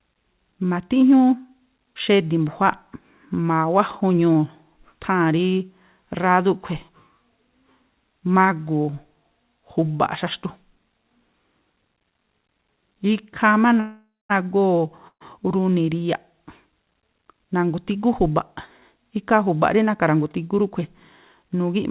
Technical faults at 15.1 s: call audio freeze

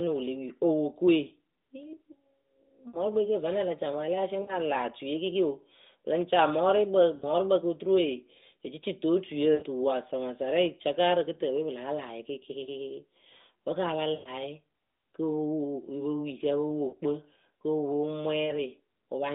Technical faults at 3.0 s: lost AMR speech frames

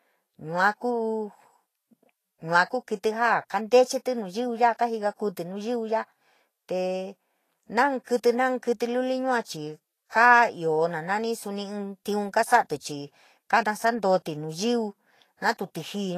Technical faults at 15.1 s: Vorbis compression

